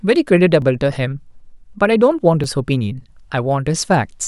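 A tiny click interrupts the speech at 0.62 s, and a slightly longer buzzy tick follows at 2.44 s. Both are repeated buffer faults. When fresh audio missed its deadline, the device replayed the last block, about 1.33 ms long, which fits a 64-sample buffer. That block played twice at 0.62 s and three times at 2.44 s, with hard joins each time. Essentially no audio is lost.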